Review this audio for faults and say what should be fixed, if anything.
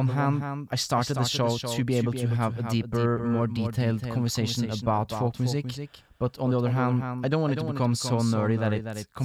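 A slower second path likely feeds the mix, doubling the audio track throughout: a dry repeat of the speech, about 10 dB down, roughly 300 ms late. To prevent it, route each source through a single capture path and check edits so no duplicate, offset copy remains in the mix.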